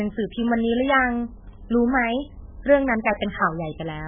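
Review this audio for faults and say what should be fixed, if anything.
Heavy MP3 compression runs through the whole speech clip. Nothing survives above 3.5 kHz, and the remaining band sounds watery and swirly as weak frequency lines drop in and out from frame to frame, with smeared attacks. That points to a very low bitrate, around 8 kbps, as the likely cause. A plain low-pass filter would also remove the treble, but without the shifting, chirpy texture. Encode from the original at a much higher bitrate, or use a lossless format.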